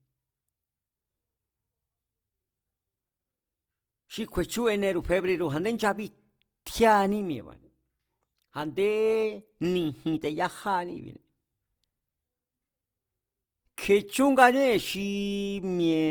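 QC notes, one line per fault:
Throughout, Opus compression: the speech sounds rough and grainy, noisy in texture but with little swirling, and the bandwidth extends to about 20.2 kHz. This is likely Opus music-mode coding at a rate that fits about 24 kbps, which fills starved bands with folded or noise energy.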